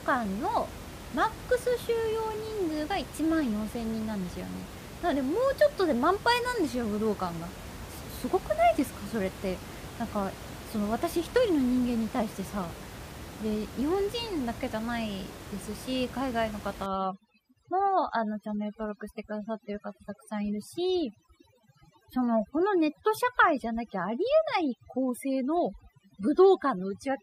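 From 16.86 s to the end, overdone noise removal sets in. A noise reducer pushed too hard cuts any frequency band near its noise estimate, so the room noise, about 14 dB below the speech, breaks into twinkling, warbling specks, and quiet parts of the speech drop out with it. On a spectrogram, the smooth noise floor shatters into isolated dots and gaps.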